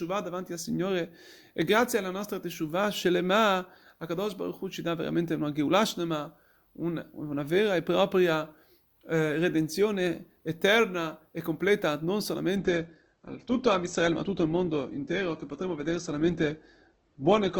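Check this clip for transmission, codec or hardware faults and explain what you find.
One fault: an adaptive stream switching to a lower bitrate. From 12.56 s, right after "eterna e completa non", to the end, the speech abruptly goes dull, with nothing above about 8.2 kHz and more obvious coding artefacts, yet no gap. The connection slowed and the player switched to a leaner encoding. The sound fits Opus falling from around 64 kbit/s to about 12 kbit/s, where the encoder drops treble and approximates detail to save bits.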